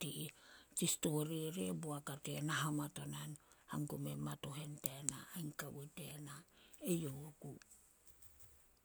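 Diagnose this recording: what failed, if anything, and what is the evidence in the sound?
Nothing failed, and the sound gives no evidence of a fault at any stage of the recording.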